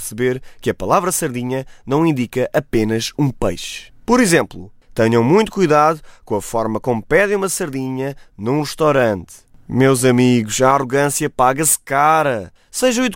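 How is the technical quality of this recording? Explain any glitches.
The recording carries one fault, sample clock jitter, present for the whole speech clip. The converter's clock wanders by around two microseconds, so each sample lands slightly early or late, and the error scales with how steeply the waveform is moving, sitting roughly 30 dB below the signal. It is heard as a fine hiss riding on louder, brighter syllables and disappearing in pauses. A spectrogram shows a faint broadband haze tracking energetic high-frequency speech, absent in gaps.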